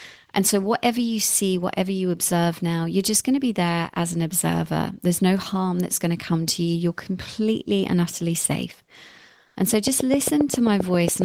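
From 9.47 to 9.55 s, comfort noise replaces the background for 80 ms, likely from Opus-style discontinuous transmission: a flat, featureless hiss about 3 dB quieter, smooth and detail-free on a spectrogram.

From 9.74 s to the end, a train of clicks ticks regularly at about 7.4 per second, peaking well above the speech, likely interference, showing as evenly spaced vertical spikes.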